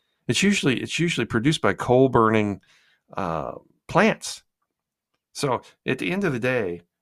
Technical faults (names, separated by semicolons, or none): none